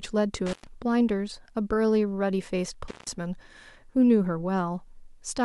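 A loose connection in this speech recording's signal path briefly opened twice, an intermittent contact: the sound drops out with crackle at 0.46–0.67 s and 2.88–3.10 s, for roughly 105 ms and 164 ms.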